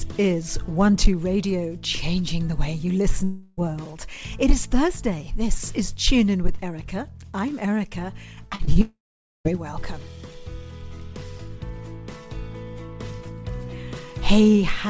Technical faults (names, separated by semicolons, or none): long network dropout; short concealed packet loss